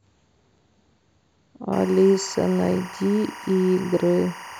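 Timecode bleed runs from 1.73 s to the end of this speech clip. It is a steady chirping warble about 20 dB under the voice, flipping between pitches near 1 and 2 kHz. Linear timecode, at a rate that fits 23.976 fps, is leaking in from a neighbouring track or cable.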